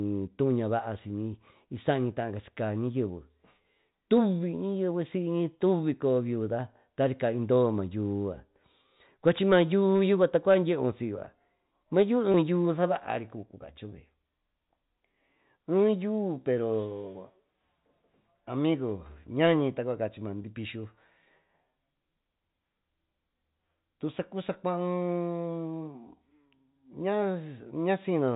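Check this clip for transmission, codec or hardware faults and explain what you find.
Two brief dropouts are audible, both packet loss with pitch repetition, heard within the 4 kHz band of the G.711 telephone coding. At 12.32 to 12.34 s and again at 20.42 s, about 20 ms of sound, consistent with one lost packet each, was bridged by repeating the last pitch period, giving a short buzzy hold. On a waveform this appears as identical repeated cycles, and on a spectrogram as harmonics frozen flat for that instant.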